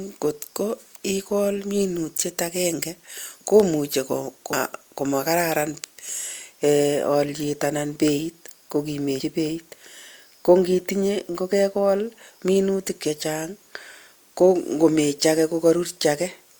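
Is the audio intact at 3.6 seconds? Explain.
Yes, the speech at 3.6 seconds is intact, with no audible fault at that moment.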